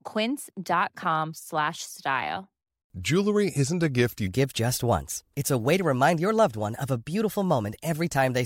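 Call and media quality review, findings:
Section at the wrong speed, 4.27 s to end: playback likely clocked at 1.19x, so speech runs hurried and about three semitones higher.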